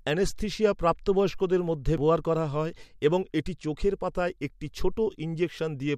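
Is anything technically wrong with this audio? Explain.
Yes. At 1.97 s the speech has a CD skip. The pickup laser was knocked off its track, or thrown by a flaw on the disc surface, and landed on a different turn of the spiral. The player muted for a few milliseconds before carrying on from the new position. A short tick marks the spot, and the speech resumes abruptly from a different point, with no continuity across the join.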